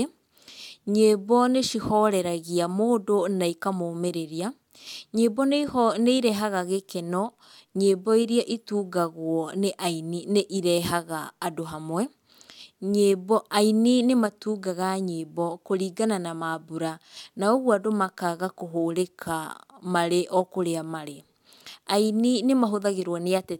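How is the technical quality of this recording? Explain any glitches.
The technical quality of the recording is sound, with no glitches to explain.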